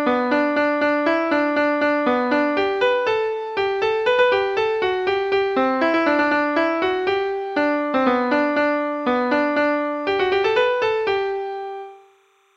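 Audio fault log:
throughout, timecode bleed: linear timecode from an adjacent track or cable has leaked into the audio path, its square wave flipping between roughly 1 kHz and 2 kHz, giving a faint chirping warble about 40 dB beneath the sound, whose rhythm fits 29.97 frame-per-second code.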